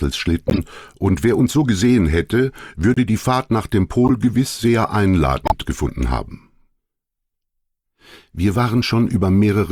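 At 0.48 to 0.59 s, 2.94 to 2.98 s, 4.05 to 4.11 s and 5.45 to 5.52 s the audio carries bursts from a corrupt frame decoded. Damaged bits in the compressed stream were decoded anyway, so misread gains and codes put energy in the wrong frequency bands. Each burst is a short chirp or squeak of noise. The first spans several frames, the second about one, and the loudest is at 5.45 s.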